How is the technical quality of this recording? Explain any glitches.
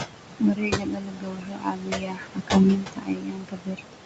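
The recording is marred by heavy noise suppression that also eats into the speech. The audio stops at 8 kHz, as expected for this call path, and the room noise sits about 9 dB below the speech.

Noise suppressor artifacts run through the whole clip. The suppressor pulls down every band it judges to be steady noise, by about 21 dB. The background drops away between phrases and swells under them.

Speech cut by the noise suppressor affects most of the clip, from 0.40 to 3.94 s, roughly three seconds in total. The suppressor mistook parts of the speech for noise and turned them down with the background, by up to about 22 dB. Soft consonants and word endings sound swallowed and faint.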